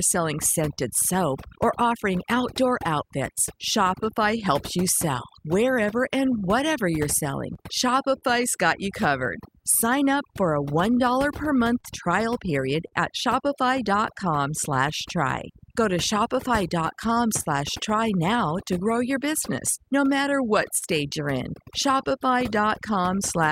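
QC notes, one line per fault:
throughout, overdone noise removal: the denoiser's cranked too hard, so the background drops and breaks up into twinkly specks.
throughout, clock drift between sender and receiver: the sender's clock runs slow, by about 4 percent, so the receiver's buffer keeps draining and you get small, uneven timing hiccups all the way through.
0.73–5.46 s, 7.31–8.24 s, 10.10–20.84 s, scattered short gaps: a couple of dozen lost or late packets, none much past 40 ms, each patched by stretching the last sound, heard as brief ticks and smears.
1.60–23.39 s, repeated timing corrections: the receiver keeps repeating little slices to keep pace with the slow sender, playing at 98 percent speed and adding about half a second.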